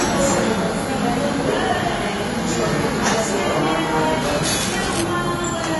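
Everyday sounds that come across dull and smeared throughout, with a fizzy, warbling texture on anything sustained and nothing above 11.5 kHz. These are plainly audible AAC compression artefacts, likely from AAC-LC at a low bitrate, which fits around 32 kbps: the coder drops the top band and quantises what remains coarsely. From 4.44 to 5.02 s, a dense, uneven scratching rustle sits over the sound, roughly 10 dB below it. This is cable scratch noise, likely from a worn cable or connector being moved so its contact resistance jumps about.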